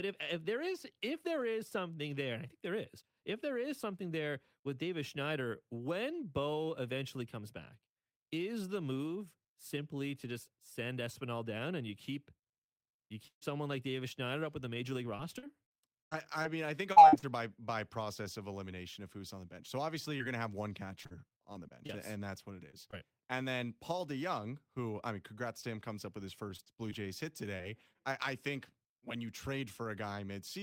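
At 13.27 to 13.43 s, right before "someone like", there's a burst of packet loss: about 140 ms goes missing, gets papered over with a fading continuation, then drops to silence before the speech picks up. From 15.17 to 17.24 s you get repeated packet loss, with nine gaps up to 90 ms each, so it sounds choppy and robotic. A short concealed packet loss at 20.18 s blurs about 20 ms into a little smear. The robotic chop comes back at 21.02 to 21.91 s after "have one". More brief concealed losses hit at 22.71 and 22.91 s, each a quick wobble. A shorter robotic stretch follows at 26.56 to 27.03 s after "comes up with his", and one last concealed loss at 27.57 s.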